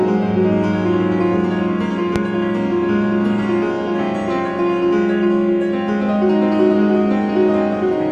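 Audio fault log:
2.16–2.18 s, loud pop: a single sharp pop lands on top of the music, standing well above it at roughly 15 dB, while the music carries straight on underneath. That's the sound of a brief voltage jolt, likely a switch, plug or static discharge, getting into the signal path.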